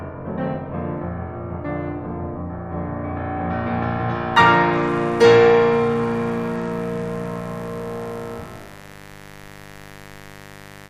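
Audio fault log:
4.71–10.89 s, mains buzz: a steady, raspy 50 Hz buzz enters under the music and runs to the end, roughly 20 dB down. Switching spikes leaking in twice per mains cycle build a dense ladder of harmonics reaching several kilohertz, hence the rasp rather than a clean hum.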